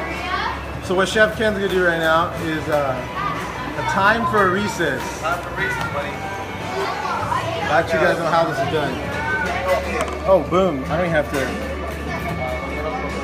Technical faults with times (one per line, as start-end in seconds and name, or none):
none